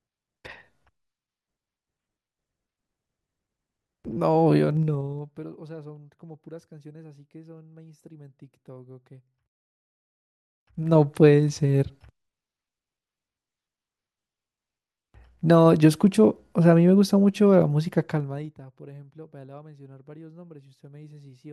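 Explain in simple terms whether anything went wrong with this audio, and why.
Zipper noise appears three times in this speech, from 4.56 to 5.56 s, 10.44 to 10.96 s, and 18.04 to 18.6 s. The volume jumps in small steps instead of gliding, roughly fifteen to thirty per second, and each jump ticks.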